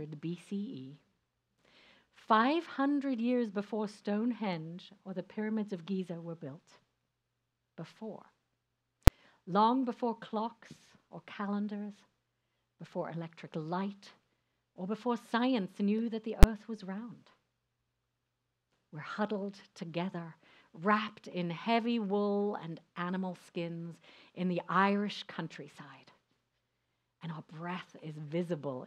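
At 9.07 s and again at 16.43 s, invalid numbers at full scale: a calculation produced infinite or invalid values that were clamped to maximum level, pinning the output for about 5 ms and then 10 ms. Each is heard as a single sharp bang. The waveform shows a flat stretch at one extreme value, far beyond the audio's peaks, and the spectrogram shows bright vertical broadband stripes.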